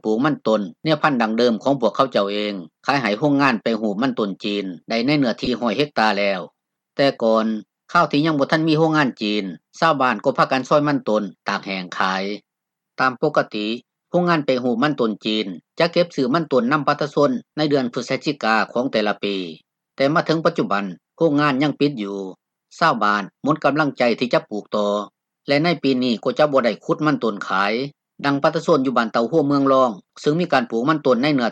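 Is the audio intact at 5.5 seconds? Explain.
No. From 5.45 to 5.48 s there is a brief smeared, noisy patch. This is AAC frame loss with concealment: the decoder rebuilt roughly 21 ms of missing audio, which fits a single lost frame, by reusing the last good spectrum.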